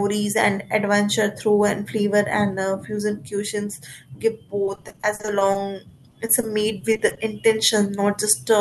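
From 4.65 to 5.57 s the speech breaks into repeated packet loss with a robotic sound. About a dozen short holes appear, the longest 40 ms. Each is patched by stretching the last sound, so roughly 28% of the stretch is filled-in audio. It turns choppy. From 6.11 to 7.19 s the same fault returns. The gaps here are shorter, up to 20 ms, and about 15% is concealed. Pieces drop out, heard through a call codec band-limited near 12 kHz.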